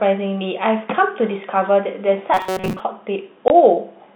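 From 2.34 to 2.80 s the speech goes into a rigid, metallic buzz at 188 Hz. That's robotic sound from repeated short buffers, likely caused by audio arriving too seldom so a slice of about 5.3 ms was looped, with most of the real sound in that stretch skipped.

Then at 3.48 to 3.50 s there's a 20 ms hole with hard edges. That's packet loss filled with silence, which fits a single lost 20 ms packet replaced by nothing, all through the narrow G.711 telephone band.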